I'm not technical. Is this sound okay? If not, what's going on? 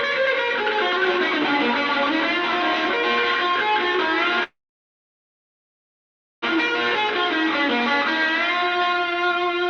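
No. At 4.43 s the audio stops and stays stopped until 6.44 s, about two seconds. This is a call audio freeze, likely caused by delayed network packets. The receiver briefly carries the last sound forward, then goes almost silent for nearly 1.9 s. When the audio resumes, it continues exactly where it stopped, so nothing is lost. Everything after that point simply arrives about two seconds later than it should.

From 8.64 s to 9.64 s, the audio plays noticeably quicker, at about 108% of normal speed, while the pitch stays the same. This is a jitter buffer speed-up. The receiver has more audio stored than it wants, so it cuts out many tiny slices to catch up, about a tenth of a second in total. The result sounds hurried rather than higher.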